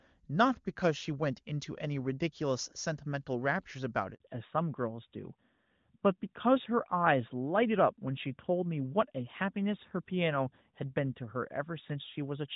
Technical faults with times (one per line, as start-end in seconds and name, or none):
4.14-4.20 handover gap
4.20-12.56 fallback to narrowband